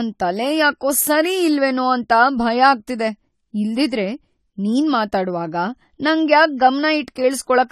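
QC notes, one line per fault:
Throughout: AAC compression. Nothing is heard above 14.1 kHz. The speech sounds dull and smeared, with plainly audible warble and fizz on sibilants. The likely cause is an AAC-LC encode at a bitrate that fits 32 kbps, too few bits for the upper bands.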